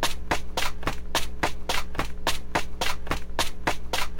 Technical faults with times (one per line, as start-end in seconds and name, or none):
0.00-4.20 mains hum